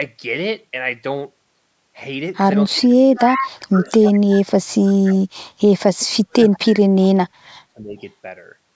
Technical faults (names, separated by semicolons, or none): speech suppressed in double talk; echo leak